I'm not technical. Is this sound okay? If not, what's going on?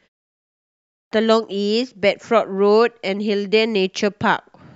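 No. This has a clipped start after a pause: the playback device dozed off during the opening half-second of silence and needed time to wake. About 0.55 s of speech, from 0.56 to 1.12 s, is lost, so the talking begins abruptly, already partway in.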